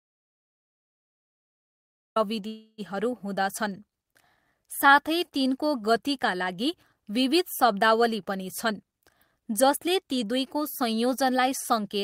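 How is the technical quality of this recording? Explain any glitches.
The recording has three distinct glitches: a silent opening, a brief stall early on, and a hurried stretch near the end.

From the very start until 2.16 s the audio is silent, an audio dropout to silence already under way when the recording begins. The input was most likely lost, whether from a disconnected device, a failed link or a mute, while the recorder kept writing silence. No room tone is present, so the waveform is a flat line and the spectrogram is completely blank until the speech starts abruptly.

Between 2.47 and 2.81 s there is a call audio freeze. Packets were most likely delayed until the receiver's jitter buffer ran dry. For about 306 ms the last sound is stretched into a decaying buzzy tone, ending in roughly 20 ms of silence before speech resumes exactly where it left off. Nothing is lost, but a pause has been inserted. 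On a spectrogram the harmonics run flat and smeared, then fade.

From 8.64 to 11.96 s the speech runs about 7% fast with no change in pitch. This is a jitter buffer speed-up, in which the receiver trimmed away surplus buffered audio by cutting out short pitch-period slices again and again, about a fifth of a second in total. The speech sounds slightly rushed. In the waveform and spectrogram, syllables are packed closer together while the harmonic spacing stays unchanged.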